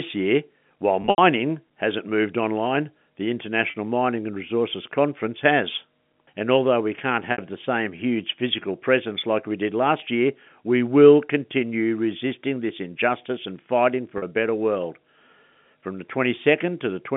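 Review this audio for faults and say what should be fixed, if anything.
Packet loss with pitch repetition occurs at 1.02–1.18 s (120 ms lost over 160 ms, longest run 80 ms), 3.70, 7.32, 10.00 and 14.18 s. Gaps fitting 20 ms packets are bridged by looping the last pitch period, heard as a brief buzzy hold. On a waveform this shows as identical repeated cycles. On a spectrogram it shows as frozen horizontal harmonics fading out. Forward error correction or a deeper jitter buffer on the network path would prevent it.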